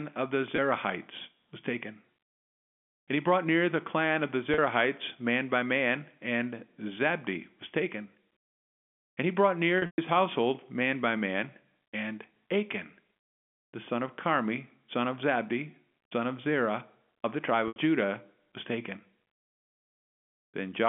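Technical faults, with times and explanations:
0.56 s, 4.54 s, 9.78 to 9.98 s and 17.68 to 17.76 s, packet loss with pitch repetition: audio went missing after "of the" (20 ms), after "the clan of the" (40 ms), across a 200 ms stretch after "he brought", before "household man by man" (160 ms in total, the longest run 120 ms), and at 17.68 s (80 ms). The receiver filled each gap by repeating the last pitch period. The two short gaps therefore sound like a briefly held, buzzy tone. The 120 ms run and the 80 ms gap last longer than the roughly 50 ms fade, so they die away into silence before the sound cross-fades back. A plain dropout or click would have no repeated, buzzing tone inside the gap. The G.711 telephone band, 200 Hz to 3.4 kHz, stays the same across each gap.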